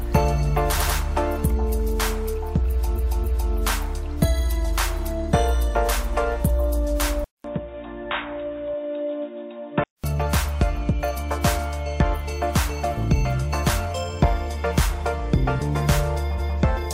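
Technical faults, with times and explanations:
0.77–0.95 s, 2.95–3.51 s and 16.37–16.56 s, repeated frames: each time the sound stutters, replaying the same short stretch. A 93 ms block is played twice more at 0.77 s, a 279 ms block twice more at 2.95 s, and a 186 ms block once more at 16.37 s. The compressed frames were duplicated before decoding, adding about 0.19 s, 0.56 s and 0.19 s.
7.24–10.04 s, input switched to a poorer device: after a 200 ms gap the sound turns dull and boxy, with nothing above 3.8 kHz. It drops by roughly 5 dB, and a new noise floor appears about 40 dB below the signal. At 10.04 s the fuller sound returns. The recording likely switched to a narrower-band microphone or a headset call profile, which brings its own tone, level and noise.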